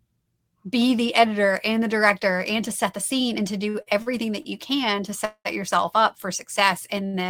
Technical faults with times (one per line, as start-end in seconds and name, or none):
3.69-4.47 repeated stalls (stutter)
5.25-5.47 call audio freeze
7.06-7.15 short stall from a late packet